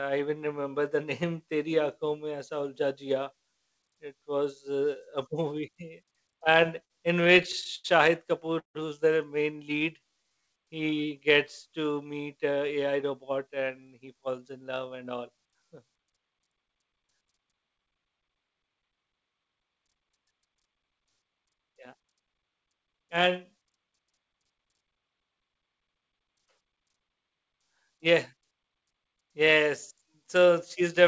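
From 6.44 to 7.86 s the audio shows repeated stalls (stutter). Packets arrived late, the jitter buffer kept running dry, and the receiver stretched the last sound across about fourteen short waits of up to 89 ms, roughly a fifth of that stretch. A second burst from 8.40 to 8.77 s, just before "who's the main", has four waits of up to 157 ms and fills about half the span. Nothing is lost, which separates it from dropouts, but the flow catches and drags in uneven jerks.

Between "who's the main" and "he gets to meet", from 9.57 to 10.66 s, a jitter buffer slow-down follows. To rebuild its reserve, the receiver repeated single pitch periods. That adds 127 ms and plays this stretch at 89% speed with unchanged pitch. Unlike the stutter, the motion is smooth and continuous, just drawn out.

A jitter buffer speed-up runs from 12.49 to 15.31 s at 110% speed, trimming about 0.3 s of excess delay by cutting out short pitch-period pieces. 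A brief second one at 24.38 to 24.62 s runs at 117% and removes about 50 ms. Pitch stays put, so it sounds hurried. The bandwidth, which stops at 8 kHz, points to a G.722 call codec.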